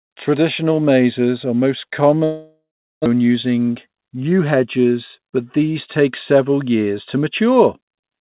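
Speech carried over a call link whose G.711 mu-law coding leaves nothing above 4 kHz has two timing faults. From 2.24 to 3.08 s, what sounds like a long network dropout is likely to blame: the last sound is stretched into a fading buzz, then about 0.37 s of silence follows, and speech resumes with roughly 0.6 s of content simply gone. A short concealment glitch would patch a few tens of milliseconds and lose nothing, but here whole material vanishes and the gap pushes playback roughly 0.2 s late. From 3.16 to 5.20 s a jitter buffer speed-up follows. Small pitch-period-sized pieces are cut out repeatedly, about 0.2 s in total, so the speech runs at roughly 109% and sounds hurried. Because the pitch stays put, this differs from a resampling or clock error, which would raise the voice along with the tempo.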